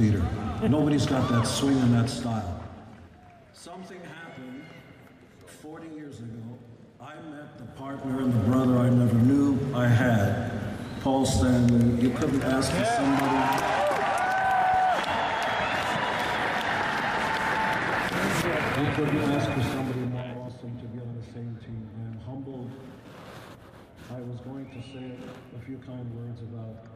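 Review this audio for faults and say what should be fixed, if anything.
Zipper noise appears twice: from 7.64 to 8.41 s, as the level climbs by roughly 20 dB, and from 19.48 to 20.50 s, as it falls by roughly 15 dB. Each move is made in 2 dB jumps, about ten a second in the rise and seven in the fall. Every jump leaves a small click, so a ticking rides on the sound while the level moves. These changes are not continuous, and the clicks occur only during the level change. To prevent it, ramp the gain per sample or smooth it before applying it.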